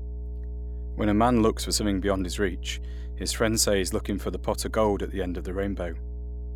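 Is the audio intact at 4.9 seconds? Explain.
No. At 4.9 seconds the speech carries mains hum, as it does for the whole clip. It is a steady low tone at 60 Hz with a few low harmonics above it. It sits only around 10 dB below the speech, so it is clearly audible under every syllable. The hum comes from the power line leaking into the signal path. A ground loop or a nearby transformer couples that 60 Hz alternating current into the recording.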